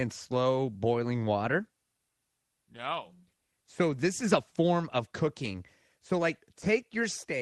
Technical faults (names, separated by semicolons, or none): none